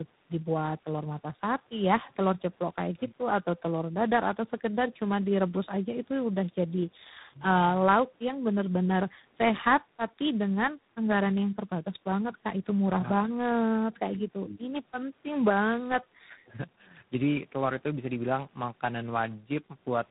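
A speech recording with tandem speech coding audible from start to finish. The band stops at about 3.8 kHz, and the voice has a layered roughness and warble that one codec alone would not produce. The sound points to two speech coders in sequence: a low-rate CELP coder near 8 kbit/s, then an ADPCM stage near 24 kbit/s, bridged by a 64 kbit/s A-law link. Each coder re-encodes the previous coder's errors, so the distortion compounds.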